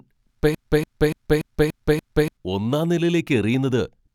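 Speech with a broken-record loop from 0.55 to 2.37 s: a 0.29 s fragment repeats six times, showing as identical repeating blocks, likely from a stalled player or stream.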